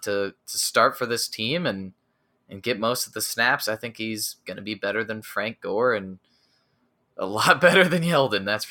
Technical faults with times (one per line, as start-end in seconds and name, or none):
none